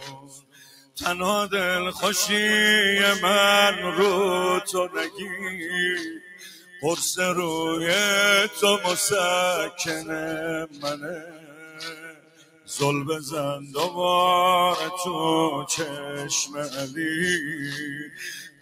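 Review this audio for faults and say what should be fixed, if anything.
A noise suppressor tuned for speech has been applied to material that is not speech. It treats sustained tones, ambience and reverberant tails as background noise and pulls them down, swinging the level by about 15 dB across the clip. Attacks survive while held sound and decays sink, so the texture pumps and thins. On a spectrogram, sustained horizontal bands fade or break up shortly after each onset. In the waveform, the envelope collapses behind every transient.

The noise suppressor also cuts specific stretches of sound harder than the rest. The drops fall at 0.00–0.98 s (about 18 dB deepest), 4.88–5.27 s (about 12 dB), 6.14–6.84 s (about 14 dB), 10.66–12.71 s (about 19 dB), 13.57–13.76 s (about 7 dB), 15.91–16.14 s (about 4 dB), 16.46–16.98 s (about 9 dB) and 17.95–18.61 s (about 17 dB). In each one, steady or decaying content sinks or its tail is truncated. 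These show as darkened gaps in the spectrogram and as abrupt envelope notches in the waveform.

Disable speech noise suppression, or switch it to a music mode, whenever the source is not speech.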